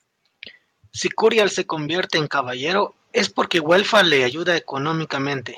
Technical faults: microphone overload; microphone volume stepped down

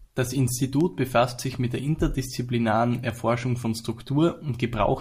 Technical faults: word clock ticks

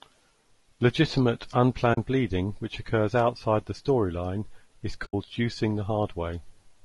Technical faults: low-delay AAC compression; AAC frame loss with muting

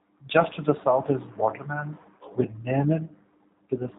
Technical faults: G.729 codec

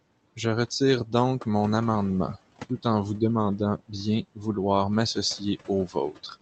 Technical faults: noise suppressor artifacts; speech cut by the noise suppressor

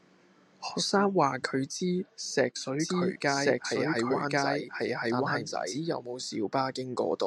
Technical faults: doubled audio track

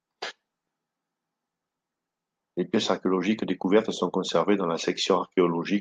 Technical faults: none

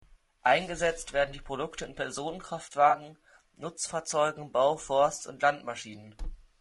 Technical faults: low-delay AAC compression; AAC frame loss with concealment

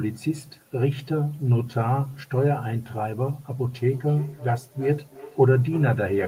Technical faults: feedback echo between two devices

